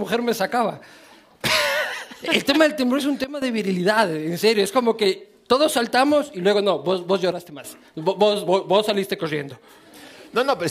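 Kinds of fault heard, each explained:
Sudden gain jump: a digital gain change, likely applied with no ramp, abruptly drops sound and background together, by about 12 dB at 3.24–3.42 s and about 9 dB at 7.32–7.64 s.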